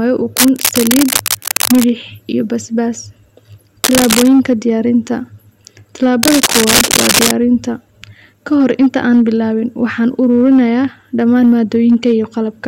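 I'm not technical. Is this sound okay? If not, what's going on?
No. The speech is hard clipping all the way through. It was recorded louder than the equipment could handle, so the loudest moments get their tops sliced flat. That adds a harsh, crackly fuzz on the louder syllables across the whole clip.

There are also three bursts of scratchy, rustling noise: from 0.37 to 1.90 s, 3.83 to 4.28 s, and 6.23 to 7.33 s. The first two are about as loud as the speech, and the last is louder. This is likely cable scratch noise, from a worn cable or plug being moved.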